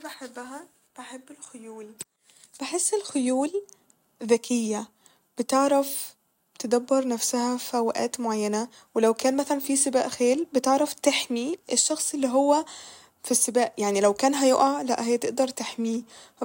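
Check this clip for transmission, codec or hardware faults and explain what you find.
No faults turn up anywhere in this speech recording. There is nothing here that calls for further explanation.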